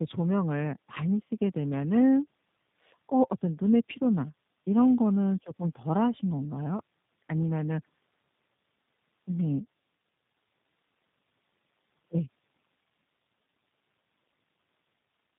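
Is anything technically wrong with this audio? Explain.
Yes. Throughout the speech there is tandem speech coding: it passed through two low-rate speech codecs in succession, consistent with AMR narrowband and then G.729A. The second re-encoded the first's already degraded output, compounding losses, so speech sounds rough, muffled and warbly, with nothing above 3.8 kHz.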